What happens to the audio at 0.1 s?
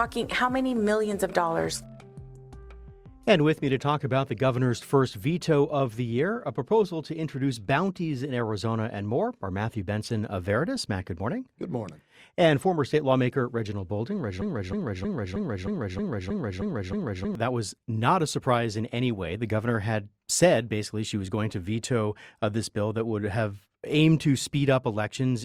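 Nothing goes wrong at 0.1 s; the audio plays through that moment intact, with no dropout, click or distortion.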